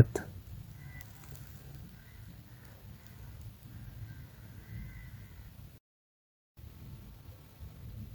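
Throughout the speech, computer activity noise is present. Load swings in the computer disturb the audio circuit's shared ground, and this leaks in as a faint buzzing chirp pulsing at roughly 200 Hz, sitting well below the speech at around 35 dB down.

At 5.78 s a playback stall occurs. The player most likely ran short of data or had its thread held up, so the output drops to silence for about 0.79 s. The speech breaks off mid-flow and resumes at 6.57 s.

From 6.57 s to the end at 8.15 s comes time-compressed catch-up. To clear the backlog built up during the stall, the player trims small pieces and cross-fades across the joins. The speech runs about 1.15 times faster at unchanged pitch, sounding rushed.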